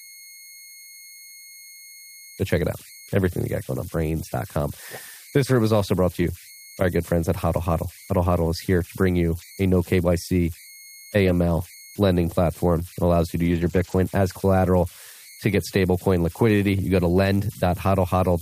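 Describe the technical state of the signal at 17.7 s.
At 17.7 s the speech carries converter idle tones, present throughout the whole clip rather than at this moment alone. With no dither, the delta-sigma converter settles into repeating bit patterns whenever the input is small, producing a whistle near 2 kHz in the pauses and a grainy texture under quiet speech, about 24 dB below the signal. A spectrogram shows a thin steady line around 2 kHz crossing the gaps; the waveform shows low-level periodic ripple in silences.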